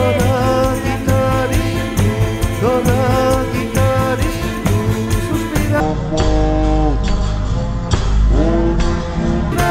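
From 5.80 s to 9.52 s the audio falls into a section at the wrong speed: it plays at 0.52 times its proper rate, so everything slows to about half pace and drops roughly ten semitones, turning deep and sluggish. Speed and pitch fall together, which sets it apart from a pitch shift or time-stretch, where one changes without the other. The likely cause is that section being played against the wrong clock.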